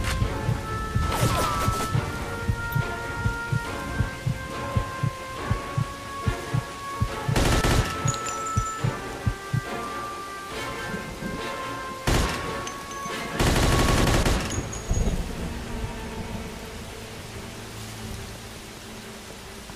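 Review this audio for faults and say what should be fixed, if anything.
Crude rate conversion, 5.32 to 6.84 s: unfiltered linear interpolation from 44.1 to 48 kHz adds gritty inharmonic fizz about 35 dB down, visible as stray spectrogram lines. Resample with a proper band-limited filter.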